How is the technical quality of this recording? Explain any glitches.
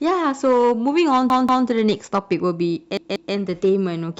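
The recording has two glitches, both repeated buffers. At 1.3 to 1.67 s and again at 2.97 to 3.34 s, new audio failed to arrive in time, so the device replayed its last block twice. Each repeat lasts about 186 ms, which fits an 8192-sample buffer. You hear a short stutter, the same fragment of speech sounding again with a hard join at each repeat.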